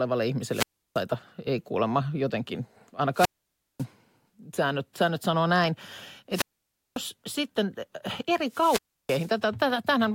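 A short swell of hiss, then near silence, then the speech returning, at 0.49 to 1.03 s (about 330 ms muted), 3.13 to 3.86 s after "ei kuulemma jotenkin" (about 550 ms), 6.31 to 7.01 s between "säännöt säännöt sanoo näin" and "sitten eri" (about 550 ms), and 8.48 to 9.36 s after "sitten eri" (about 330 ms). Each is a wireless microphone squelch dropout: the analogue FM radio signal fades, and the receiver's squelch mutes the output until it recovers.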